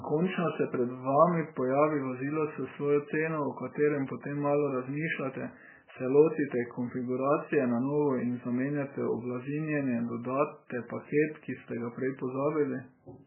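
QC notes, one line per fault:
throughout: MP3 compression, likely at a bitrate low enough to fit about 8 kbps. Starved of bits, the encoder removes everything above 3 kHz and drops weak frequency lines from frame to frame, so the speech sounds dull, heavily watery and swirly, with smeared attacks.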